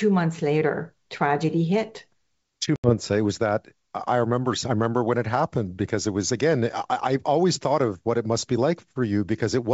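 Speech carried over G.722 wideband coding, clear to about 7 kHz in a way that fits 64 kbit/s, shows packet loss on an ADPCM call at 2.76 s. A few packets vanish, leaving a hard-edged 80 ms silence. What sets it apart from a plain dropout is the return: the decoder's adaptive predictor and step size have drifted from the sender's, so the audio after the hole comes back distorted until they realign by 2.94 s.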